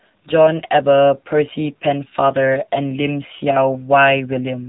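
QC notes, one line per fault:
Throughout: AMR narrowband mobile codec. The speech is squeezed into a mobile-phone band, with nothing above about 3.8 kHz, so it sounds dull and boxed in. The codec rebuilds the voice from a simple vocal-tract model excited by a few pulses in each short sub-frame. At this low setting, which fits the 7.4 kbps AMR-NB mode, the damage is plainly audible. The voice takes on a buzzy, synthetic edge because much of its fine detail is discarded.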